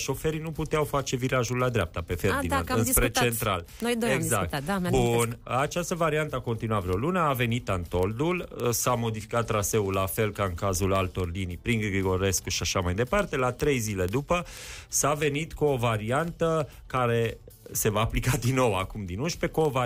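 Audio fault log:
0.10 to 19.85 s, word clock ticks: sharp ticks of uneven strength about every 40 ms, as an unlocked receiver clock slips one sample each time, which fits a roughly 500 ppm mismatch.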